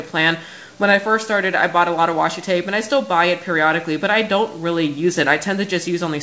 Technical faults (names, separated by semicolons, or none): none